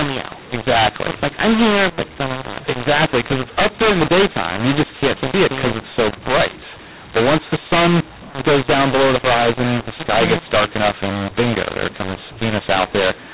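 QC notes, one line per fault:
throughout, mu-law and A-law mixed up: speech coded as G.711 mu-law is decoded as A-law, so every 8-bit code lands on the wrong level. Levels are scrambled and the quietest samples rise well above silence, giving harsh, distorted speech and noise-filled pauses.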